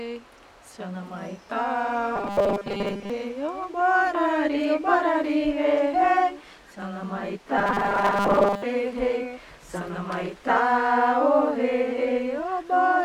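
From 2.16 to 3.10 s, and again from 7.58 to 8.63 s, the sound collapses into a rigid metallic buzz at 200 Hz: robotic sound from repeated short buffers. A 5 ms slice is replayed over and over, most likely because new audio arrived too seldom, so most of the real signal is skipped. Unlike plain pitch shifting, the fixed buzz ignores the original pitch while loosely tracking its shape.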